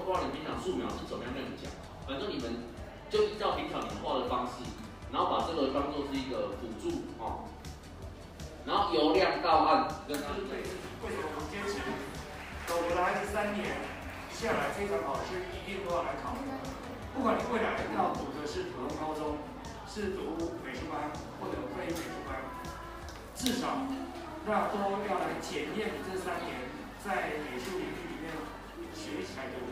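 No technical faults can be heard anywhere in the recording. Nothing in it suggests a dropout, glitch or other failure at any point.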